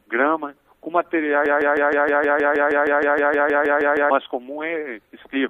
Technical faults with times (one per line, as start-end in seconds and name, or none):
1.46-4.10 broken-record loop